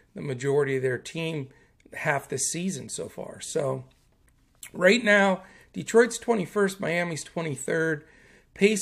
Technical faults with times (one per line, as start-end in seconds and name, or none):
none